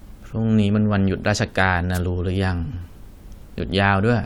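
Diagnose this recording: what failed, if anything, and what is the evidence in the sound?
A short swish of static breaks through the speech from 1.94 to 1.99 s. This is a wireless microphone noise hit in the analogue radio link: reflected signals cancelled the FM carrier for about 50 ms, letting receiver noise rise over the audio.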